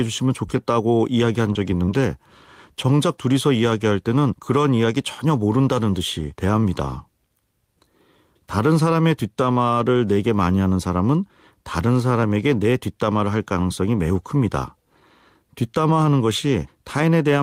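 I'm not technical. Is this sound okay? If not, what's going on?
No. At about 1.53 to 1.57 seconds there is a short concealed packet loss: roughly 20 milliseconds of the call arrived too late to be played. The receiving phone or app covered the gap by stretching out the sound that came just before, then blended back into the real audio. You hear a tiny smear or wobble, not a silent gap. That is the difference from a plain dropout, where the sound would cut out completely.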